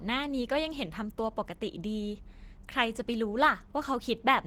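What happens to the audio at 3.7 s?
At 3.7 s the speech carries Opus compression damage that runs through the whole clip: a hoarse, grainy texture, likely from low-bitrate hybrid coding. On a spectrogram the upper bands look smeared and noise-filled up to about 20.2 kHz.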